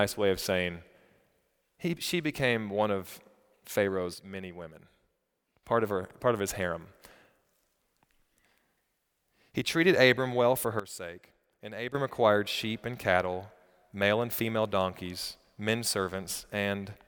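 A gain setting in the digital chain was likely switched instantly, with no ramp, twice in this speech recording, giving a sudden gain jump each time. From 4.14 to 5.63 s the level falls by about 7 dB in a single step and then snaps back. From 10.80 to 11.95 s it drops by about 12 dB and returns just as abruptly. Speech and background noise sink and recover together, so each step sounds like a fader being yanked, not a change in the speech itself.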